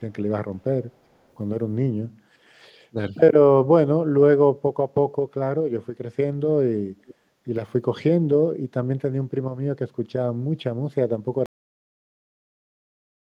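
At 2.92 to 2.97 s the speech dips briefly, losing about 5 dB for roughly 50 ms. This is speech suppressed in double talk, likely caused by an echo canceller that heard both sides at once, could not tell the local talker from loudspeaker echo, and pulled its gain down.

From 7.06 to 7.14 s a faint delayed copy of the voice comes back, trailing the original by 425 ms and sitting roughly 25 dB below it. This is an echo leak, likely from a far-end loudspeaker whose echo canceller let part of the pickup pass back into the call.

At 11.46 s the audio has a cut-off end. It stops mid-sound and falls straight to digital silence with no decay. The final buffers were never written or played, and the rest of the clip stays silent.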